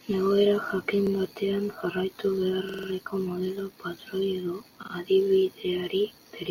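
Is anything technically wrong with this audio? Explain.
Yes. The speech has a repeated buffer fault three times: at 1.07 s (one extra play), 2.69 to 2.88 s (four extra plays), and 4.83 to 4.92 s (two extra plays). Audio arrived late, so the last block, about 46 ms, which fits a 2048-sample buffer, played again. Each is heard as a short stutter with hard joins.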